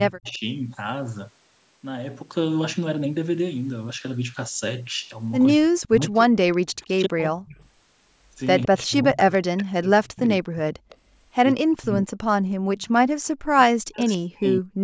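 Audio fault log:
0.00–0.42 s and 5.54–14.77 s, speech suppressed in double talk: the sound dips up to about 25 dB, then about 40 dB over roughly 4 s in pieces, likely because the echo canceller muted overlapping talk.
0.26–0.38 s, 6.53–6.93 s, 8.62–8.67 s, 10.89–10.97 s, echo leak: faint copies trail 161 ms behind, about 25 to 35 dB down, likely residual loudspeaker echo the canceller missed.
12.47–12.67 s, background gated by the echo canceller: the room sound itself drops about 37 dB for 200 ms and returns, unlike speech suppression, which cuts into the talk.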